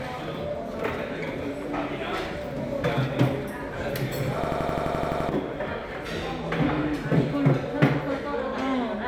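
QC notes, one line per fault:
4.44–5.29 s, system hang loop: machine-gun stutter as one 85 ms slice repeats ten times at 11.7 Hz. The frozen system left the hardware cycling its ring buffer, which fits a 4096-sample buffer, and roughly a second of sound is lost.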